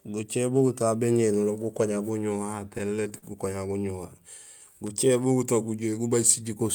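From 2.47 to 3.25 s the speech breaks into repeated stalls (stutter). Packets reached the receiver late, so its jitter buffer ran dry eight times, and each time the last sound was stretched out until new audio arrived. The gaps total about 110 ms, the longest 43 ms, filling roughly a seventh of that stretch. It drags and hiccups. On a spectrogram, short frozen bands of repeated harmonics break the flow, and the waveform shows brief copied or fading segments.

Between 4.68 and 5.09 s a jitter buffer slow-down follows. With its reserve running low or its target delay just raised, the receiver repeated single pitch periods and fragments of pauses to build up a reserve, adding 54 ms so the passage plays at about 89% speed with unchanged pitch. Sounds seem drawn out. On a spectrogram the harmonics stay at the same height but stretch sideways, and the waveform shows near-identical cycles repeated back to back.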